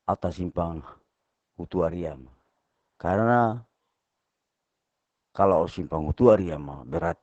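A speech clip carrying heavy Opus voice compression from start to finish. The SILK linear-prediction coder is starved of bits, which fits a rate of roughly 10 kbps, so the excitation is quantised coarsely and the voice turns hoarse, muffled and faintly robotic. On a spectrogram, energy stops abruptly at about 8 kHz with nothing above, and the harmonic striations look smeared and grainy rather than crisp. The waveform shows no clipping or dropouts.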